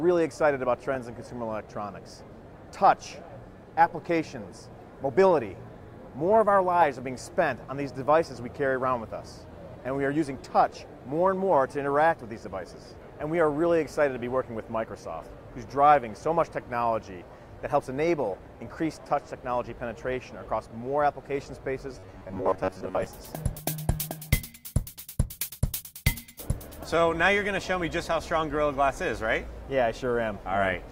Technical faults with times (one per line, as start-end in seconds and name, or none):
21.99-23.06 robotic sound from repeated short buffers